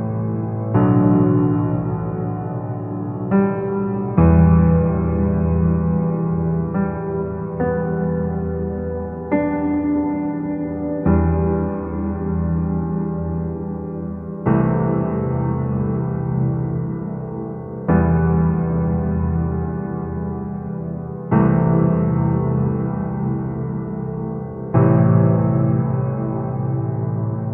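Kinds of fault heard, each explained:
No faults heard.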